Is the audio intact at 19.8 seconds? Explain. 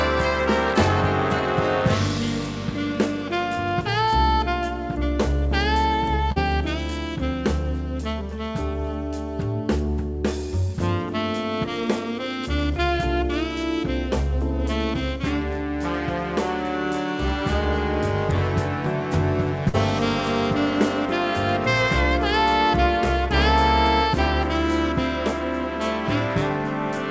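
No, there's a short concealed packet loss from 19.69 to 19.76 s, right at that point. About 40 ms never arrived in time, so the receiver stretched the preceding sound to cover the hole and blended back, leaving a brief smear or wobble.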